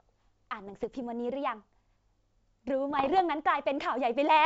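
From 0.67 to 1.02 s and again from 2.90 to 3.21 s, the speech breaks into pops and rough, gritty bursts with brief jumps in level: bit errors on an ADPCM link, at a density that suggests around half a percent of bits flipped. Each flipped bit throws off the decoder's step size and predictor, so the damage rings on for a few milliseconds. A waveform shows spiky clicks and uneven envelope swells; a spectrogram shows scattered broadband vertical streaks across the G.722 band.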